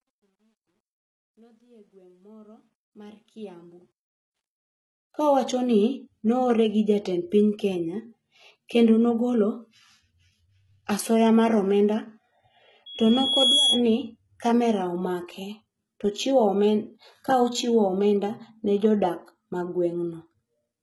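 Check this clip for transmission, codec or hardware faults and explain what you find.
Three faults are audible: codec damage across the whole recording, grainy distortion on the opening fade, and a brief feedback squeal.

Throughout, the speech has gritty, lispy sibilants and a metallic, synthetic-sounding treble with nothing above 11.8 kHz. This is likely HE-AAC compression at a low bitrate around 16 kbps. Spectral band replication rebuilds the top octaves from copied lower bands, so the treble is present but misaligned. Band-limiting alone would sound dull, not metallic.

From 0.0 to 5.5 s the speech fades in smoothly, but the quiet start carries truncation distortion, worst from 0.0 to 2.53 s. The fade was computed without dither at a resolution fitting an 11-bit word, so low levels become coarse steps. That gives gritty distortion that follows the signal, unlike steady background hiss.

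From 12.86 to 13.83 s a loudspeaker feedback squeal appears: a single 3.3 kHz tone swelling over roughly 0.7 s to about 5 dB above the speech. A microphone re-amplifying its own loudspeaker makes that one frequency grow by itself. A fixed-level interfering tone would not swell like this.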